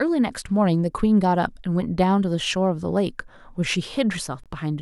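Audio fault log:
4.44–4.46 s, Bluetooth stall: the speech drops to complete silence for about 22 ms and then resumes. The likely cause is radio interference delaying packets until the headphones' buffer emptied, so playback halted until the retransmitted audio arrived. On the waveform this is a short flat, near-silent stretch with abrupt edges. On the spectrogram it is a narrow, fully blank vertical band cutting across every frequency.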